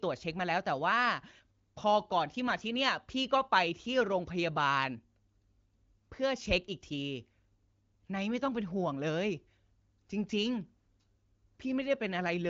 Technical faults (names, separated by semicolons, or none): none